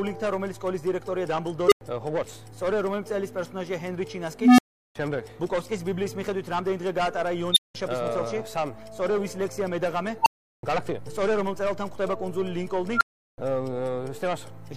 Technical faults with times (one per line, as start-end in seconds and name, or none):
1.67-1.81 unstable filter
4.40-4.95 unstable filter
7.52-7.75 unstable filter
10.22-10.63 unstable filter
12.94-13.38 unstable filter